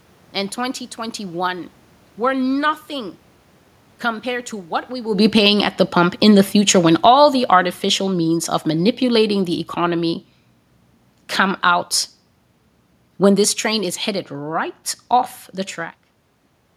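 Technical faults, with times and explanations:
5.1 to 10.2 s, automatic gain falling: Right after "compared to what we", the speech sinks by about 10 dB over five seconds, and the room noise drops with it. The talker shifts position at roughly 5 s, but that does not account for the level change. The automatic gain control judged the input too loud, or its background noise too strong, and slowly pulled its gain down. Because it lowers everything reaching the microphone, background and speech fall together rather than the speech alone.
5.55 to 6.03 s and 7.12 to 7.6 s, automatic gain rising: In the middle of that long fade, the level briefly swells twice, by about 3 dB in the first half-second and about 4 dB in the second, with the room noise lifting along with the speech. Each time, the automatic gain control judged the input too quiet and pushed its gain back up. These short upward corrections work against the overall downward drift, so the level visibly pumps while it is falling.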